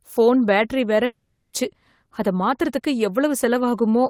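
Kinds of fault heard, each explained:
Long network dropout: from 1.05 to 1.64 s the sound smears into a fading buzz, then brief silence, and resumes with 400 ms missing, likely from packets lost in transit.
Jitter buffer speed-up: from 2.20 to 2.80 s the receiver trims short pitch-period pieces, roughly 70 ms in total, so speech runs 10% faster at unchanged pitch and sounds hurried.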